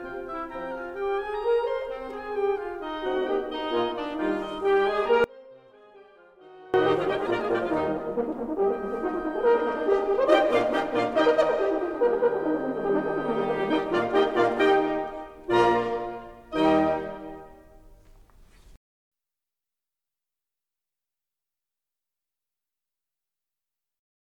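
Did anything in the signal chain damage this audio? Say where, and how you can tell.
Yes. An audio dropout to a faint residue runs from 5.24 s to 6.74 s, cutting about 1.5 s out of the music. The signal vanishes abruptly rather than fading, yet the gap isn't silent: a faint sound remains roughly 25 dB below the music's normal level, so the path downstream stayed live. The likely cause is an intermittent break in the analogue wiring or a connector, leaving only a faint residue until contact returned.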